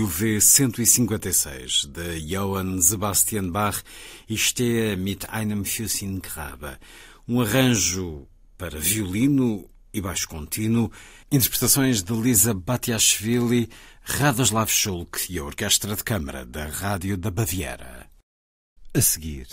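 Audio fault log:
No faults heard in this speech clip; nothing to log.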